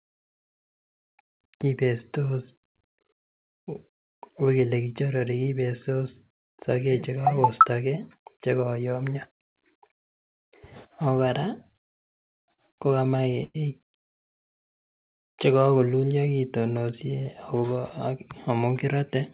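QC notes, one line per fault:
12.0–13.56 s, repeated stalls (stutter): packets arrived late, jitter buffer kept emptying; eleven gaps up to 107 ms were filled by stretching sound, so it drags and stutters.
17.55–18.57 s, jitter buffer speed-up, just after "chekokululio kitonosie": excess buffered audio was trimmed by removing short pitch-period pieces, roughly 70 ms, so speech runs about 6% faster, same pitch.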